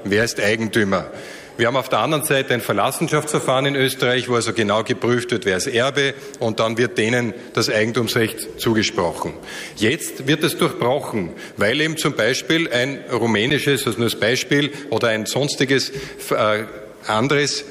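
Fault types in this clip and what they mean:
Block of digital silence: at 13.50 s the audio drops out for 10 ms, replaced by silence, then resumes with no fade on either side. This points to either an output buffer that was not refilled in time or a processing step that produced invalid values, and the sound alone does not settle which. At only 10 ms the gap is too short to register as silence and comes across as a brief tick or dip.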